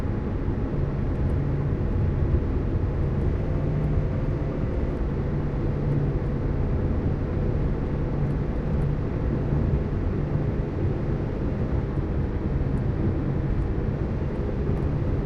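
From 3.24 s to 4.96 s the audio runs about 5.5% fast, raising pitch roughly 93 cents, nearly a semitone, then snaps back. This is a drift correction step, likely from clock-matching software abruptly changing playback rate to rebalance its buffer.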